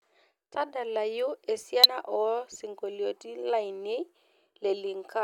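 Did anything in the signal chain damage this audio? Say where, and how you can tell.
Yes, in the codec stage. Damaged data in the compressed stream causes a brief blip from 1.84 to 1.86 s, where the decoder misread corrupted frames and lost sync.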